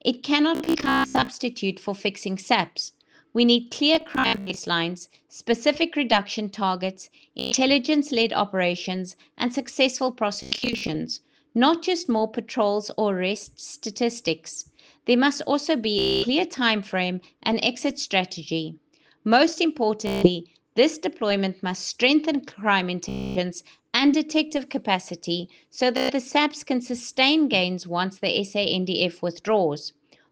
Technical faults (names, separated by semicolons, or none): Bluetooth stutter